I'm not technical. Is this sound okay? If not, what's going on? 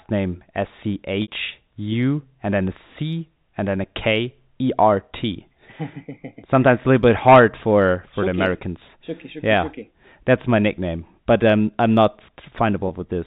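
No, there are two brief glitches from packet loss with pitch repetition. At 1.22 to 1.28 s, about 60 ms of speech goes missing, so the sound holds, buzzes, then fades before the speech returns. At 12.88 to 12.90 s, a shorter 20 ms gap sounds like a slightly held, buzzy hiccup. The clip has the narrow telephone sound of G.711 coding.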